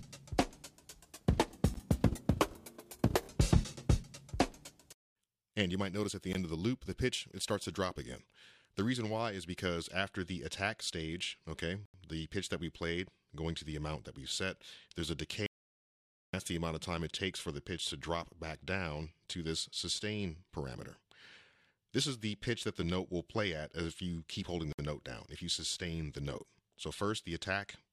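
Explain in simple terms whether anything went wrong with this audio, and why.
The sound briefly cuts to silence four times: at 1.74 s, at 6.33 s, from 11.86 to 11.94 s, and from 24.73 to 24.79 s. These are most likely Bluetooth stalls, where wireless interference holds up the audio, so playback pauses for a split second and then carries on.

A longer gap runs from 15.46 to 16.33 s, close to a second of total silence with no background hiss at all. This is an audio dropout to silence, likely from the input briefly disconnecting, and whatever happened during it is lost rather than just delayed.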